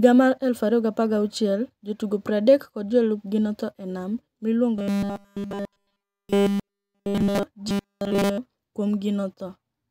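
From 4.76 to 7.43 s and again from 7.68 to 8.38 s the speech turns into a rigid metallic buzz pitched at 200 Hz: robotic sound from repeated short buffers. The likely cause is a starved stream looping roughly 5 ms of audio in place of nearly everything that should have played.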